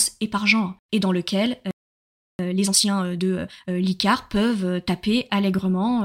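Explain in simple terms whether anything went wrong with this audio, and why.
A playback stall happens at 1.71 s, right after "et dans lequel": the speech cuts out in mid-flow and the output stays silent for about 0.68 s, until 2.39 s. The player most likely ran short of incoming audio, or was briefly held up by other work on the device, so it had nothing to send to the speakers until it caught up. When sound returns, the speech continues from where it stopped.

A time-compressed catch-up follows from 2.39 s to 3.75 s. Having fallen behind during the silence, the player hurries to make up the lost time, running the speech at about 1.5 times its normal speed. Instead of speeding the recording up like a fast tape, it snips out tiny slices and smoothly blends the remaining pieces together. That keeps the pitch normal, but the talking sounds rushed.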